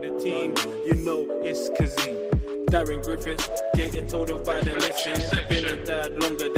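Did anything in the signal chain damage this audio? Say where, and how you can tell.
Yes: a call bitrate drop at the codec stage, from 3.12 s to the end. The sound turns coarse and muffled as high frequencies vanish, which points to the encoder's rate falling from about 32 kbps to about 13 kbps, bottoming out for roughly 2.5 s without recovering.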